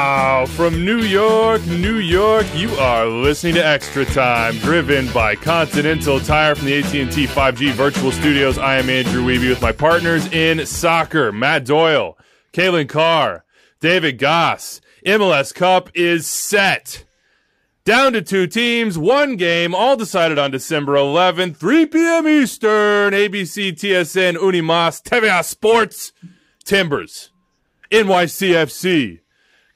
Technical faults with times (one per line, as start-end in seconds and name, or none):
none